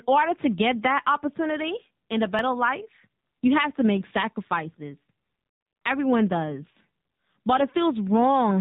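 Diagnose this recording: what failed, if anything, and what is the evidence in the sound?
At the codec stage, the speech was carried by the AMR narrowband mobile codec. Everything above 4 kHz is gone, and the damage is plainly audible throughout. The pulse-driven vocal-tract model leaves a buzzy, synthetic quality, which points to a low mode around 7.4 kbps.

At the buffer or recorder stage, audio is missing between chunks, likely because the process handles sound in 3 s blocks and drops a sliver at each handover. There are brief skips after "that opportunity and a" at 2.39 s and after "have to make sacrifices" at 5.38 s. Roughly 10 ms is lost at each point, and the two sides are spliced directly together.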